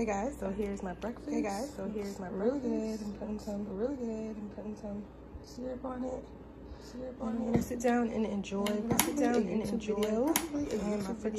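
From start to finish the audio carries a doubled audio track: a second, full-band copy trails the original by about one and a half seconds, roughly 5 dB quieter. It likely comes from the same signal being captured again through a slower path. A room echo would decay and take on colour, but this copy stays clean, constant in level and fixed in delay, so it sounds like a separate repeat.

From 1.67 s to 7.67 s the sound shifts to an adaptive stream at a lower bitrate. The change is abrupt and leaves no gap. Nothing remains above 14.2 kHz, the upper range turns thin, and codec artefacts grow. The character fits a drop from full AAC at around 96 kbit/s to a low-rate HE-AAC stream. A dropout would break the signal, but here playback continues and only the quality falls for those six seconds before it snaps back.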